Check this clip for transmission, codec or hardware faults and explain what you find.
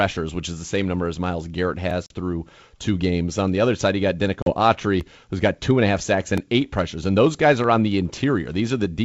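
The clip has two kinds of fault: short blocks of digital silence and packet loss on an ADPCM call. The G.722 wideband coding itself, at 64 kbit/s, carries the speech clearly up to about 7 kHz.

Blocks of digital silence occur at 1.91 s, 5.01 s and 6.38 s. They last 3.5 ms, 1.33 ms and 1.79 ms. The one at 5.01 s fits a 64-sample block. Each is a run of zeros where the output buffer went unfilled in time, or where a calculation gave invalid values. The sound stops and restarts with no fade. All three are far shorter than 15 ms, so each is heard as a tick or a dip, not as silence.

Packet loss on an ADPCM call occurs from 2.06 to 2.12 s and from 4.42 to 4.53 s. Each time about 40 ms of audio is lost, roughly a couple of packets. The missing packets are replaced by silence, so each event begins with a hard-edged hole. The decoder's predictor and step size then no longer match the sender's. 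The speech returns distorted until the decoder's state realigns, within some tens of milliseconds.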